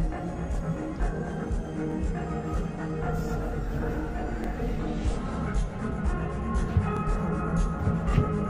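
At 1.92 to 1.94 s, then 4.44 to 4.47 s and 6.97 to 6.99 s, you get overlapping chunks. The audio was handled in 2.5 s blocks, and each new block starts about 25 ms before the previous one finished, so that sliver plays twice at every join. It comes across as a small click or stutter, and the even 2.5 s spacing between them is the giveaway.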